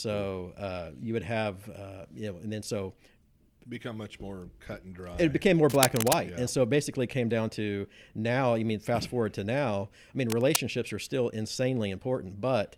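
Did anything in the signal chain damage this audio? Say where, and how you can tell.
Yes: cable scratch noise at 5.67–6.13 s and 10.30–10.57 s. Uneven rustling bursts near speech level, likely a worn analogue connector whose contact resistance fluctuated as it moved.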